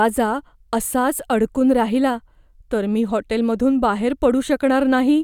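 No audible technical faults anywhere in the speech.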